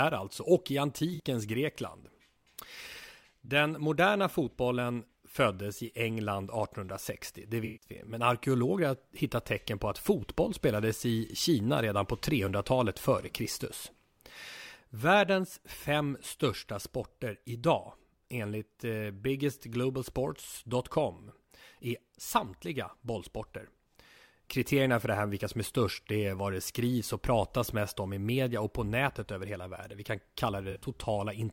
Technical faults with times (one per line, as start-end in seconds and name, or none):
1.15-1.21 corrupt frame concealed
7.65-7.89 corrupt frame concealed
30.70-30.86 corrupt frame concealed